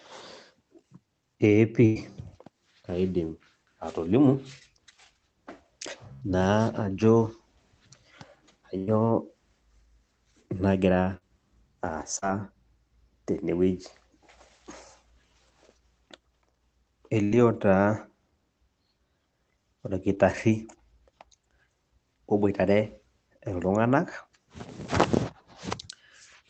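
At 1.85–1.97 s, 6.13–6.24 s, 8.78–8.89 s and 17.24–17.33 s there is a burst of packet loss, each between about 60 and 100 ms. The receiver extends the last sound and fades it, giving a held buzz or dying hiss before the speech jumps ahead with a piece missing. At 11.17–11.23 s, 12.19–12.24 s and 20.15–20.18 s, short concealed packet loss leaves 20 to 40 ms holes patched by continuing the preceding sound, heard as a brief smear or wobble. All of this sits over the WebRTC call path's Opus coding, band-limited at 8 kHz.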